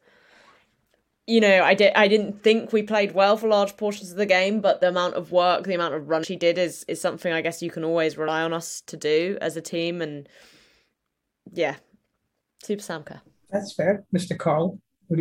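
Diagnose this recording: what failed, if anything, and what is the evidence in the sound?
The codec stage failed: damaged data in a compressed stream produces short blips at 6.23 to 6.25 s, after "work the amount of", at 8.27 s, after "guess you can always", and at 13.96 to 13.98 s. Corrupted frames are misread, and the decoder loses sync until the next header.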